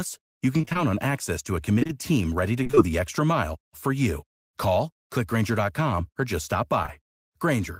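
Between 0.57 and 0.77 s the speech turns choppy, with fragments chipped out of it. This is repeated packet loss (robotic sound): five separate holes, none longer than about 21 ms, arrive in quick succession. Each one is patched by stretching the preceding sound, so roughly half of that fifth of a second is reconstructed rather than received.

From 1.79 to 1.91 s, around "on access to a", there is a short smeared wobble. Three back-to-back short concealed packet losses, at 1.79–1.83, 1.83–1.87 and 1.87–1.91 s, each drop about 20 ms of audio. The decoder bridges each gap by carrying the last sound forward and then blending back into the real signal, which blurs the transition.

The chop returns from 2.63 to 2.79 s, between "team ready to" and "the extra mile for". This time four gaps of up to about 23 ms leave about half of the stretch filled in by the receiver rather than received.

Near the end, around "or just stop", a brief smear at 6.83–6.90 s comes from two more adjacent short concealed packet losses, each dropping about 20 ms that the receiver fills by extrapolation.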